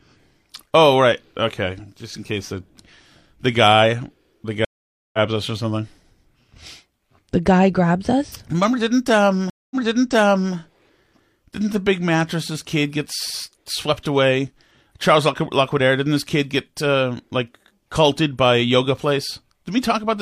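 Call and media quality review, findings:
Stream reconnect, 4.65–5.18 s: after "the guy the", about 0.49 s of silence, then audio resumes at "us or something", roughly 0.3 s further on. Network path broke; player reconnected to the live stream and restarted the decoder mid-stream.

Stream reconnect, 9.50–10.54 s: 0.21 s silence, then playback restarts 0.84 s earlier, repeating audio. Server resent a buffered burst on reconnection; fresh decoder started from that earlier point.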